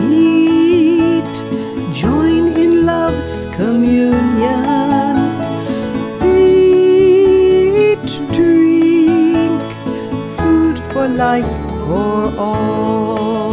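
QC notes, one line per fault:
No technical faults are audible; the signal holds steady, with no break or disturbance anywhere in the recording.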